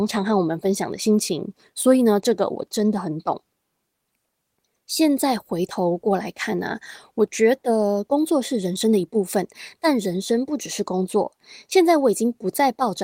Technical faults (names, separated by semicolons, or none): none